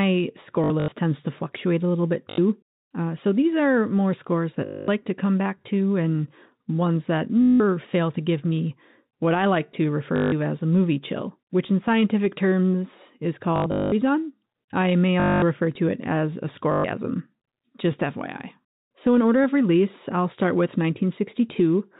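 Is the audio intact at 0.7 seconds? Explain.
No. Between 0.64 and 0.92 s, packet loss with last packet repeated fills about 160 ms of gaps, in runs up to 80 ms, with replayed audio, producing buzzy robotic stutters.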